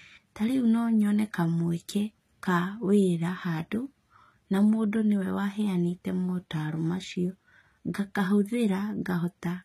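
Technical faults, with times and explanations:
Throughout, HE-AAC compression: treble up to 14.9 kHz sounds rebuilt from lower bands rather than dulled, so s sounds turn gritty and lispy, likely from a low bitrate near 20 kbps.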